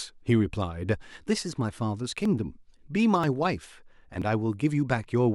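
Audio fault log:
2.25 s, 3.24 s, 4.22 s: overlap between stream segments. At each 1 s segment join, about 6 ms of speech is cut, so the waveform jumps.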